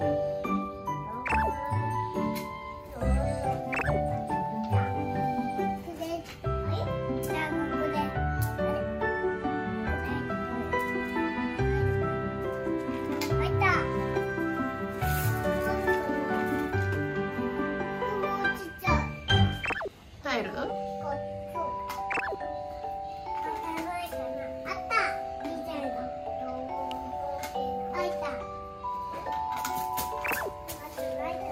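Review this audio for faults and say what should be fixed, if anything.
There's a single sharp snap at 26.91 s, peaking around -25 dBFS and sitting on top of the sound. It's likely an electrical switching spike, with a nearby switch or motor arcing into the line. Keep switched gear and motors on separate circuits, away from audio cabling.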